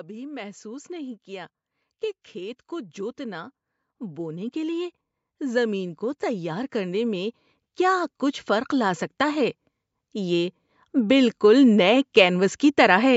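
Automatic gain rising runs from 0.05 to 11.97 s in this speech recording: the gain control, judging the input too quiet, steadily lifts level by about 19 dB, swelling voice and background together.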